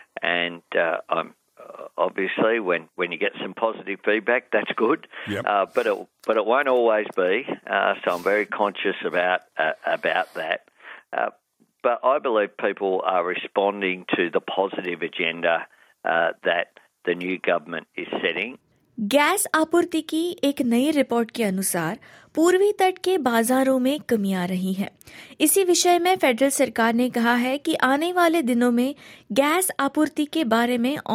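Nothing in the audio stood out as a technical problem on listening.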